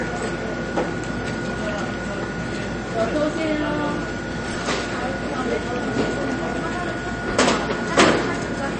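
From start to finish, nothing remains above about 8.3 kHz, and the audio has a watery, swirling quality with plainly audible damage: metallic chirps on bright, noisy parts and blurred attacks. The likely cause is MP3 compression at a low bitrate, roughly 31 kbps. Short of bits, the encoder sheds the treble at a fixed cutoff and drops weak frequency lines that flicker on and off between frames. A spectrogram shows a hard ceiling at 8.3 kHz and speckled, patchy energy below it.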